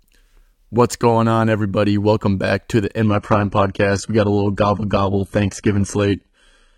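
At 3.07 s the speech switches abruptly, with no gap, to an adaptive stream at a lower bitrate that lasts to the end. The connection slowed, so a leaner encode was served: treble stops near 11.8 kHz and artefacts thicken, which fits a low-rate HE-AAC stream.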